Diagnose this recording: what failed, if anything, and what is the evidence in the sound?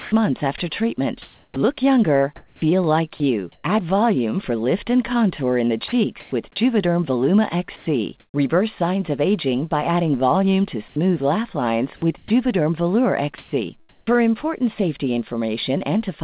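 Speech drops out to comfort noise in three stretches, 0.0 to 3.64 s, 5.88 to 8.34 s and 10.88 to 14.17 s, losing 0.9 s, 0.4 s and 0.58 s respectively. That's likely sound chopped by the voice detector in call processing, which gated off quiet parts and filled the gaps with synthetic noise.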